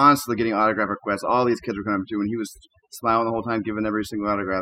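Overdone noise removal runs throughout the speech. Strong noise reduction shuts off bands near the noise floor. Pauses fall to near silence with twinkling specks.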